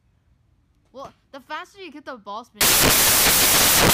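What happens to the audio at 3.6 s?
At 3.6 s the audio is inside a stretch of samples built from the wrong bytes, running from 2.61 s to the end. Each sample's bytes are assembled in the wrong order or offset, so the rapidly changing low bits dominate, giving loud, harsh broadband noise.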